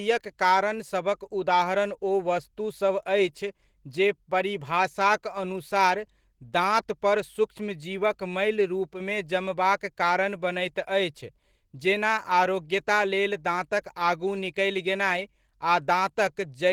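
Speech, carried throughout by Opus voice compression in its hybrid mode. The linear-prediction layer codes the band below 8 kHz and a transform layer codes the content above it, with audio extending to about 20.3 kHz. The coarse excitation coding leaves plainly audible damage: the speech sounds hoarse, slightly robotic and muffled. The artefacts point to a bitrate around 16 kbps with 20 ms frames, where too few bits reach the upper band for it to sound clean. From 8.94 s to 9.00 s, a span of about 66 ms, the level dips abruptly by about 6 dB and then recovers. This is most likely one channel dropping out of a stereo feed before the mono sum, which leaves only half of the signal common to both channels for that brief interval.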